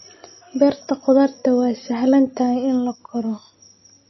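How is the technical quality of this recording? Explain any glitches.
The recording is marked by plainly audible coding damage across its whole length. The sound is consistent with MP3 compression, likely at a low bitrate around 24 kbps. Starved of bits, the encoder discarded everything above about 5.8 kHz and dropped quieter frequency lines that flicker on and off between frames. The speech therefore sounds dull and band-limited, with a watery, swirling texture, metallic chirping on s sounds, and smeared consonant attacks.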